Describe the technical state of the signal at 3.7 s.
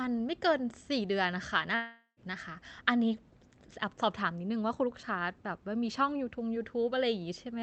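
At 3.7 s the signal is intact, with no dropout, click, distortion or other fault, only the steady sound of the speech as carried through the WebRTC call path.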